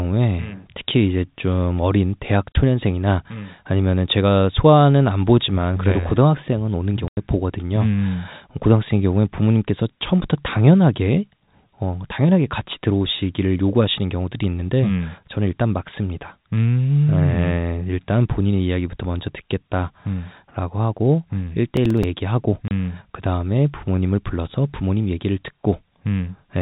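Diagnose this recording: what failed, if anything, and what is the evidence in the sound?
Packet loss filled with silence, on the network side. There are clean dropouts at 2.52 s (about 30 ms), 7.08 to 7.17 s (90 ms), and 22.68 s (30 ms again). Each hole is a multiple of 30 ms, which fits 30 ms packets, with the 90 ms gap pointing to three lost in a row. Nothing was concealed; the receiver just played silence, so each gap starts and ends with a hard edge.

Processor overload crackle, a driver or buffer problem at the device end. From 21.77 to 22.04 s there's a short gritty patch riding on the speech. It sounds like a handful of missed deadlines on small buffers of around 5 ms. Each time, the output repeated a scrap of old audio instead of fresh samples, so the tiny hard-edged splices stack into crackle. It clears once the load drops, just before the next packet hole. The G.711 telephone coding underneath is audible as a normal narrowband phone sound.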